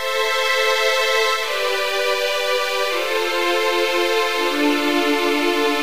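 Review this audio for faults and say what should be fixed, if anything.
Grainy, signal-dependent distortion runs through the whole clip, with the quietest passages sputtering or dropping to silence and error sitting roughly 20 dB below the sound. This is likely low bit depth without dither, consistent with truncation to about 5 bits. To prevent it, keep a higher bit depth and apply dither before any reduction.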